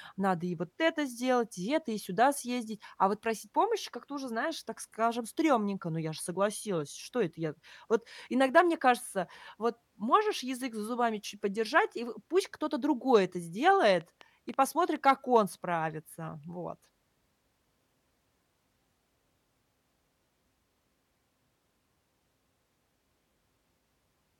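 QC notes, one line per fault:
14.01–14.97 s, train of clicks. About five sharp ticks land over the speech just before "как он справится". They repeat at roughly 4.2 per second, with uneven spacing. Each click has much the same shape, so they read as one repeating disturbance rather than separate pops. Their peaks reach roughly the level of the speech itself. The likely cause is a faulty connection or power supply or interference from nearby equipment injecting pulses.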